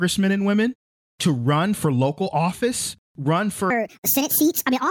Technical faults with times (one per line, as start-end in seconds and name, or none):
3.70-4.90 wrong sample rate